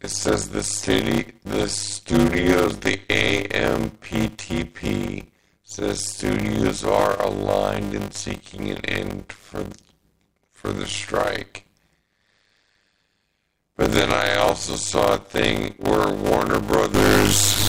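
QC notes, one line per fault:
Throughout: block size mismatch (padded). A steady buzz at 100 Hz sits under all of the speech. The sound runs at about 0.53 times normal speed, so everything is drawn out, but the timbre stays. Each block carries only 256 real samples, and the rest of a longer read block is zeros. This fits a read size near 480 samples. That inserts a short silent gap in every block, a hundred times a second. The gaps make the buzz and stretch the timing.
16.94–17.69 s: stuck bit. The last stretch of the clip turns noisy and distorted until it ends. The likely cause is one data bit held at a fixed value by a broken line or converter. Roughly half the sample values are then pushed off by that bit's weight. Which samples are hit depends on the waveform, so the error follows the signal.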